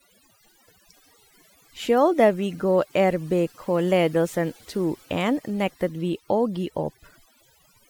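From start to finish, the speech carries overdone noise removal. The noise reduction was pushed too hard, so bands sitting near its noise estimate get pulled way down along with quiet bits of the voice, leaving a near-silent background with twinkly specks.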